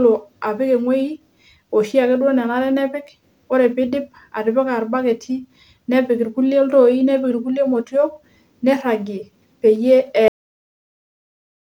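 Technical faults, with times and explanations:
10.28 s, cut-off end: the speech stops mid-sound and drops straight to digital silence with no decay, because the final buffers were never written or played.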